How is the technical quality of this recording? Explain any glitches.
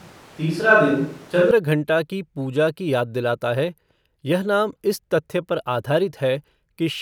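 The recording has one clear fault, at the very start. From the opening to 1.51 s the speech sounds like a switch to a distant microphone: roomy, hollow and thin in the bass, with background noise roughly 30 dB below the speech and no real level drop. The likely cause is the close microphone's feed missing, leaving a farther pickup. Unlike added reverb or a bass-cut filter, the sound snaps abruptly to close and full at 1.51 s.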